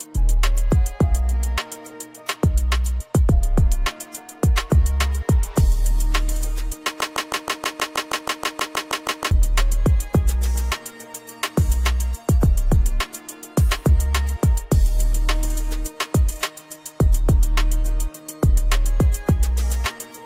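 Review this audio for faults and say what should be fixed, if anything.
A broken-record loop from 7.01 to 9.31 s: a 0.16 s fragment repeats exactly 15 times, likely a stalled stream resending its last buffer, and appears as identical blocks every 0.16 s on the spectrogram.

Watching for stalls and inserting silence rather than replaying stale buffers would prevent this.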